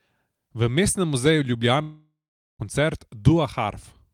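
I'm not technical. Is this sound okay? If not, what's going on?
No. From 1.81 to 2.62 s the speech stops and the last sound smears into a fading buzz, then about 0.44 s of silence, and it resumes with a piece missing. This is likely a long network dropout, where audio never arrived and was lost.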